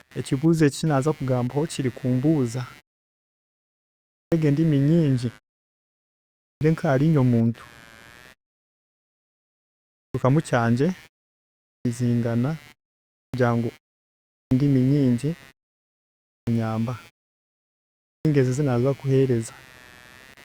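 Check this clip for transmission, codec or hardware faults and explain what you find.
Two hardware faults are present, one continuous and one recurring.

Computer activity noise runs throughout: the machine's load changes disturb the shared audio ground, producing a buzz pulsing around 150 Hz, roughly 25 dB below the speech.

Clipped start after a pause occurs at 4.01, 6.26, 9.81, 11.53, 13.03, 14.19, 16.18 and 17.93 s. The sleeping output device wakes too slowly, swallowing about 0.3 s, so speech bursts in abruptly.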